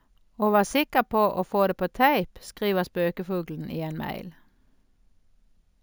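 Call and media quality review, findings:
Imaging from sample-and-hold upsampling, throughout: metallic fizz 8–16 kHz, about 20 dB down, moving against pitch, unlike hiss. 16 kHz held to 48 kHz, no smoothing.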